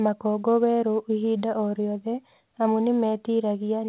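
No faults found; the speech arrives over a G.711 mu-law call path at 64 kbps, band-limited to nothing above 4 kHz as expected for that codec.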